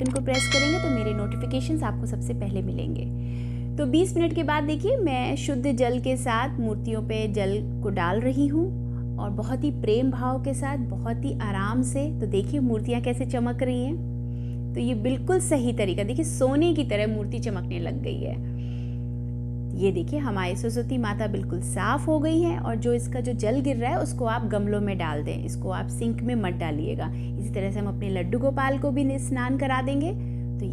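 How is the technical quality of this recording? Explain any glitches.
The technical quality is poor, because a strong mains hum runs under the whole recording. Throughout, a steady 60 Hz mains hum sits only slightly below the level of the sound itself, likely from a ground loop or nearby transformer feeding power-line current into the signal path. It is heard as a constant low drone. On a spectrogram it is a bright horizontal line at 60 Hz, with fainter lines at its low harmonics.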